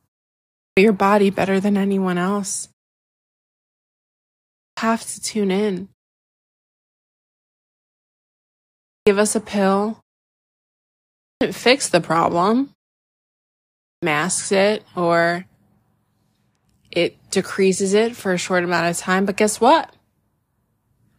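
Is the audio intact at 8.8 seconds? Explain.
No. At 8.8 seconds the audio falls inside a clipped start after a pause, from 8.69 to 9.07 s. After a silence of about 2.8 s, the output device needed time to wake. About 380 ms were swallowed, so "us a pill" begins abruptly.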